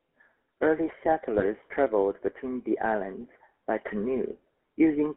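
The whole clip carries the GSM full-rate codec's signature: speech squeezed into a 200 Hz to 3.4 kHz line band, with a buzzy, gravelly roughness that fits a 13 kbps full-rate stream. The codec models the vocal tract and drives it with sparse, regularly spaced pulses, and that thin excitation is where the grit comes from.

From about 1.38 to 1.45 s, just before "traveled between the islands", there's a brief lost GSM frame, which sounds like a single 20 ms drop. The decoder papered over it by reusing the last good frame's settings, so you hear a short, rough metallic ring instead of a gap.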